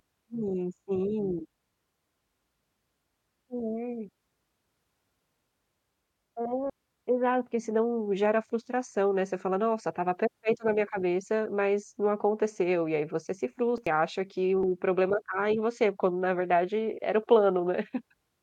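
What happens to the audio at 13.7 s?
A brief jump as the speech skips forward between 13.52 and 13.87 s, after "aí você se" and before "e acha que", skipping about a tenth of a second. Compressed frames were skipped: whole frames went missing or were rejected as damaged.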